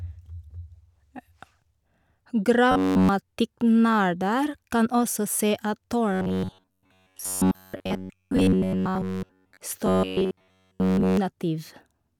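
Robotic sound from repeated short buffers hits the speech at 2.72–3.09 s, 6.13–9.60 s and 9.86–11.17 s: a rigid metallic buzz at 93.8 Hz, likely from roughly 10.7 ms chunks being looped while fresh audio stalls. The second stretch is mostly looped rather than wholly.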